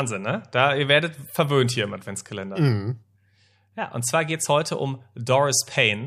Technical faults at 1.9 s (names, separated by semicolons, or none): none